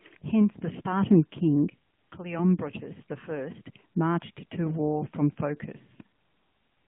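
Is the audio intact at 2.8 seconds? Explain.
No, at 2.8 seconds the speech is squeezed through the AMR narrowband mobile codec, which runs through the whole clip. Only about 150 Hz to 3.4 kHz survives, and the codec rebuilds the voice from a vocal-tract model and pulses, giving a buzzy, synthetic edge that fits a mid bitrate around 10 kbps.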